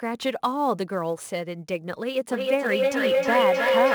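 From the start, sample clock jitter runs through the whole clip. The converter's clock wanders by several microseconds, so samples land slightly off time. The error sits around 30 dB below the speech. It sounds like a faint hiss or roughness on loud, bright sounds, gone in pauses.

At 2.29 s a feedback howl begins and lasts to the end. Two devices share the call in one room, and the sound loops back louder each trip. It narrows to a tone near 500 Hz, with the loop repeating roughly every 300 ms, peaking about 4 dB above the speech.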